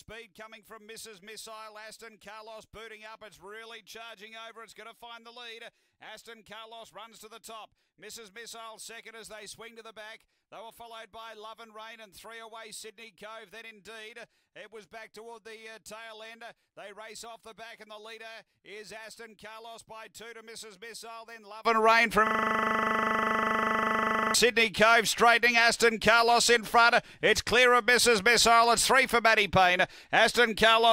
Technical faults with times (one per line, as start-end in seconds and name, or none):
0.00-21.65 one channel inverted
22.27-24.34 system hang loop